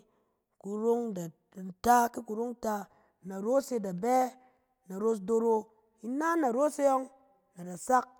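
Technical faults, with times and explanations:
No technical faults can be heard in this speech clip.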